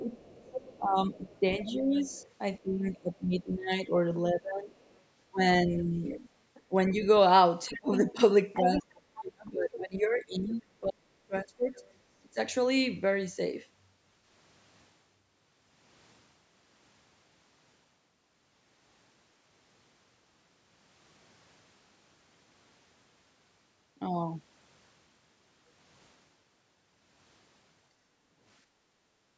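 From the start to 12.38 s the talker's speech keeps dipping and thinning, at worst by roughly 25 dB, across about seven seconds in total. This is speech suppressed in double talk. Both ends were likely talking at once, and the echo canceller pulled down the wanted voice along with the echo.

In that same stretch the other side's voice leaks through in five bursts, at 0.17 to 2.59 s, 4.79 to 5.0 s, 6.07 to 6.62 s, 7.72 to 9.23 s and 11.79 to 11.94 s. Some are barely audible, and the one near 8 s is almost as loud as the talker. The likely cause is loudspeaker sound that the echo canceller did not fully remove from the microphone.

From 28.64 s to the end, the room background sinks by about 8 dB for roughly 0.7 s. This is background gated by the echo canceller, which clamped the microphone down hard while the loudspeaker was playing.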